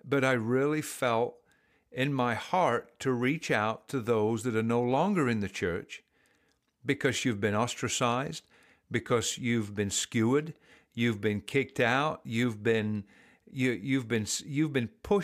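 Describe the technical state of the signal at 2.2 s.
At 2.2 s the speech signal is intact, with no audible dropout, distortion, clipping or other fault at that point.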